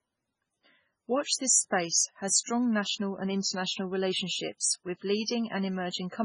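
Throughout, the speech has a watery, swirling quality with nothing above 10.5 kHz. This is likely heavy MP3 compression, fitting a very low bitrate near 16 kbps. Pre-echo occurs from 1.70 to 1.72 s and from 4.58 to 4.62 s. Coding noise spreads ahead of a sharp attack, so a brief hiss precedes it, lasting 21 ms and then 39 ms.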